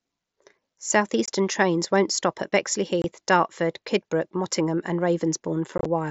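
At 1.26 to 1.28 s, just before "trains won't stop at", the audio drops out for about 22 ms. This is unconcealed Bluetooth headset packet loss. Headset voice packets never arrived, and silence or an idle pattern filled the gap. The hole has hard edges. The length fits three lost 7.5 ms packets. The same gap returns at 3.02 to 3.04 s, right after "trains won't stop at". From 5.78 to 5.86 s, several short holes scatter across about 75 ms, giving a brief chopped crackle. The wideband mSBC link carries the speech between these holes.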